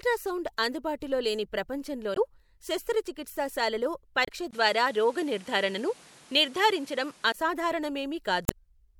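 Damaged data in the compressed stream breaks in briefly at 2.13–2.18 s, right before "శస్త్రచికిత్సా శాలలో", and again at 4.22–4.29 s just after it. Each time the decoder misreads frames and loses sync. From 4.51 to 7.34 s the sound turns duller after a 20 ms gap, with nothing above 12.6 kHz, a level shift of around 5 dB and new noise roughly 30 dB down. That's likely the input switched to a poorer device. One last damaged-data blip lands at 8.45–8.52 s.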